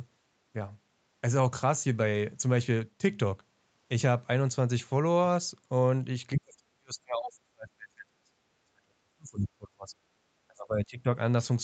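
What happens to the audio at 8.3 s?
Speech suppressed in double talk runs from 6.39 s to 8.31 s, and 8.3 s marks its end. With both sides talking, the echo canceller likely mistook this talker for loudspeaker echo and pulled the speech down, by as much as roughly 40 dB at its deepest, over about two seconds.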